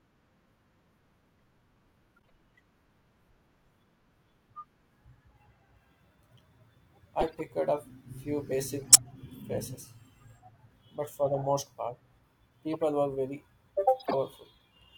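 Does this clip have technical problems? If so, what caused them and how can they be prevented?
Yes. Brief chirps and bursts of noise at 2.17–2.30 s (very faint), 7.20–7.41 s just before "up few basic", 8.88–8.98 s just after "up few basic" (the loudest), 12.73–12.78 s, and 14.00–14.14 s are corrupt frames decoded. Each one is a short run of compressed frames with flipped bits that the decoder played anyway, so misread gains and codes put energy at the wrong frequencies. Checksums on each frame, with concealment in place of decoding damaged frames, would prevent it.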